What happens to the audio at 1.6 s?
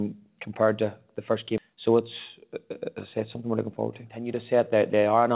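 At 1.58 to 1.60 s there is a skip ahead: roughly a second of audio was dropped and the two sides are butted together with no silent gap, unlike a dropout. Right after, from 1.70 to 2.48 s, a jitter buffer speed-up trims pitch-period slices, about 50 ms in total, so the sound runs at 106% speed with unchanged pitch.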